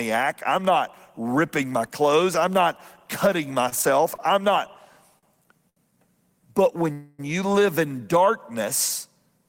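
Four short stalls from a late packet come first: at 3.69 to 3.74 s, at 4.15 to 4.21 s just before "I'm not", at 5.18 to 5.38 s just after "I'm not", and at 5.69 to 5.78 s. Each time the jitter buffer emptied and the receiver held the last sound for about 24, 36, 42 and 69 ms until the packet came. The sound then resumed at the same place, so nothing is lost. What you hear is a syllable that lingers with a slight buzz. On a spectrogram the harmonics run flat and smeared for that stretch. In the waveform the same cycle repeats.

A call audio freeze follows at 6.92 to 7.21 s, just before "you live". For about 262 ms the last sound is continued as a buzzy tone that fades without ever reaching silence. After that the audio picks up where it stopped, and this was likely caused by packets held up on the network. The spectrogram shows a frozen, blurred band that decays in level, and the waveform shows a tapering, repetitive fill.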